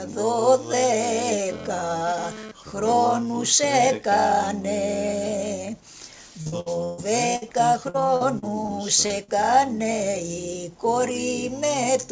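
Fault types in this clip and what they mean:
GSM phone buzz: a nearby 2G phone's roughly 217 Hz transmit bursts, rectified into the audio, give a raspy harmonic buzz about 14 dB below the sound, intermittent from 1.49 to 2.93 s.
Repeated packet loss (robotic sound): successive lost packets patched by extending prior sound, heard as choppy stretches with pieces missing from 6.42 to 7.00 s and 7.90 to 8.70 s.
Burst of packet loss: about 60 ms lost at 7.36 to 7.44 s, filled by continuing and fading the last sound before audio resumes with that part missing.
Short concealed packet loss: roughly 40 ms holes at 9.06 and 9.24 s, bridged by extrapolated sound, heard as brief smears or wobbles.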